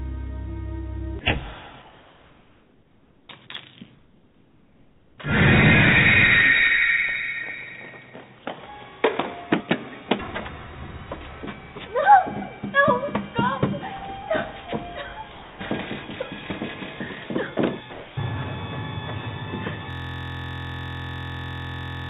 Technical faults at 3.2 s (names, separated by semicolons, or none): comfort noise in place of the background